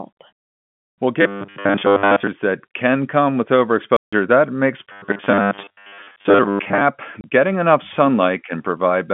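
Speech over a telephone-band line, with the narrow 150 Hz to 3.4 kHz sound of G.711 coding, interrupted by several faults. From 1.22 to 2.27 s, just before "that can come with", and again from 4.92 to 6.82 s, the sound turns into a rigid, metallic buzz at 100 Hz that only loosely tracks the speech. This is robotic sound from repeated short buffers: audio likely arrived too seldom, so a 10 ms chunk was looped while most of the real audio was skipped. Between "that can come with" and "that makes", from 3.97 to 4.13 s, the sound drops out for about 160 ms and then resumes, a playback stall where the player likely ran dry or was blocked. At 7.21 to 7.24 s, just before "getting enough", a 30 ms hard-edged hole cuts into the speech. This is packet loss filled with silence, and its length fits three 10 ms packets.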